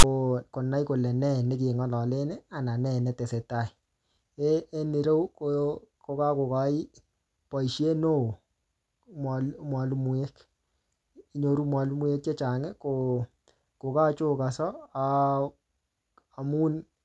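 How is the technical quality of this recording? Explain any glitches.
There's one glitch, right at the start. From 0 to 0.04 s, just before "konai kole ne ne", you get file tags played as audio. Text metadata was read as samples, giving a short, hard-edged, lopsided rasp, then a dead-silent gap where the zero padding sits.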